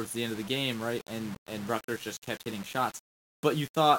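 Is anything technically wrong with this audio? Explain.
Yes. Low bit depth without dither throughout: the speech is likely rounded to about 6 bits, leaving signal-following grit roughly 20 dB down, roughest on quiet syllables.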